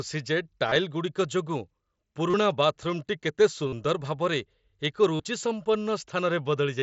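Concealed Bluetooth headset packet loss occurs at 0.68 to 0.76 s, 2.30 to 2.34 s, 3.68 to 3.73 s and 5.16 to 5.20 s. Lost packets, roughly 38 to 45 ms each time, are filled by repeating recent waveform, giving brief buzzy held tones and a slight warble on recovery.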